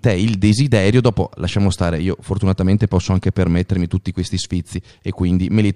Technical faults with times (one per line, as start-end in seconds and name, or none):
none